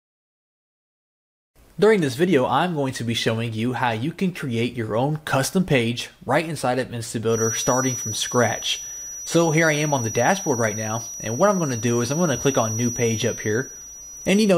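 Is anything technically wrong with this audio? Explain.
Yes. From 7.26 s to the end there is a feedback whistle. A thin, steady tone near 5.8 kHz sits roughly 10 dB below the sound and swells and fades slowly in level. The likely cause is a loudspeaker-to-microphone loop hovering just at the edge of feedback.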